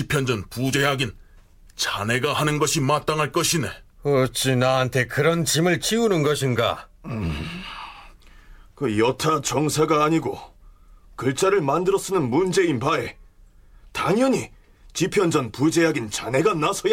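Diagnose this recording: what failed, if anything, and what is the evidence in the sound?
Nothing failed, and the sound gives no evidence of a fault at any stage.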